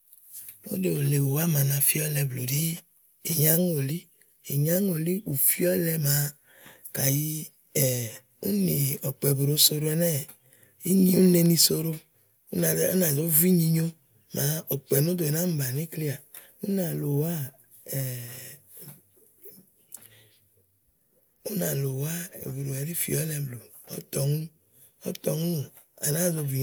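No technical faults can be heard anywhere in the recording.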